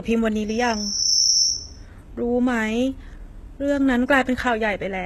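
From the start, the speech has gritty, metallic treble and nothing above 12.3 kHz. That points to HE-AAC compression, likely at a bitrate around 16 kbps, with rebuilt upper bands.

From 0.47 to 1.87 s, a loudspeaker feedback squeal rings at 5.7 kHz. The loop gain exceeds one, so the tone swells over roughly 0.7 s to sit a few dB above the speech.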